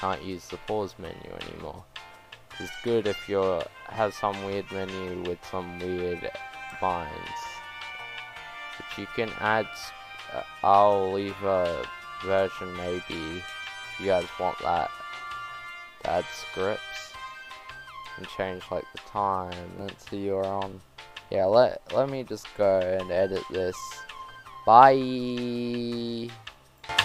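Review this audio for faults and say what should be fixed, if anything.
Nothing here needs fixing; no faults were found on review.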